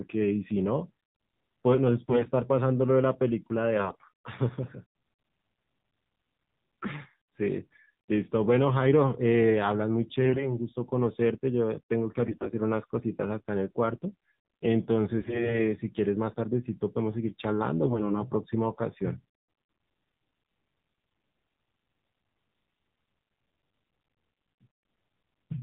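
Throughout, the AMR narrowband mobile codec at 7.4 kbps makes the speech buzzy and synthetic. A spectrogram shows nothing above 4 kHz.

AMR bit errors occur at 2.09–2.30, 3.76–4.09, 10.22–10.48, 12.26–12.54, 15.18–15.60 and 17.84–18.28 s. Corrupted bits misplace the excitation pulses, so the speech turns hoarse and gargly, with smeared, noisy harmonics.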